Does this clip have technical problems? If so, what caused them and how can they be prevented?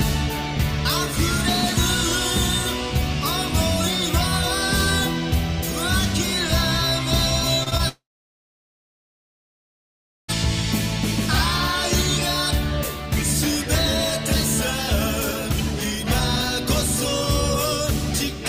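Yes. There are two short concealed packet losses, at 7.63 to 7.68 s and 7.70 to 7.73 s. Each time, about 20 ms of audio arrived too late. The receiver stretched the preceding sound to cover the gap, then blended back. Each one is heard as a quick smear or wobble. Steadier network timing and a slightly deeper jitter buffer would prevent this.

At 7.89 s the sound breaks off. It continues briefly as a fading imitation of itself, then goes silent for about 2.3 s. It resumes at 10.30 s, and about 2.4 s of audio is missing. The likely cause is a long network dropout, where nothing reached the receiver for that stretch. A more stable connection, such as wired instead of congested Wi-Fi, would prevent it.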